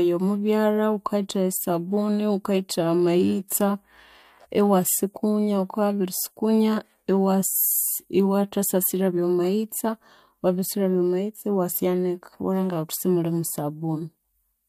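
Speech clip, no audible faults.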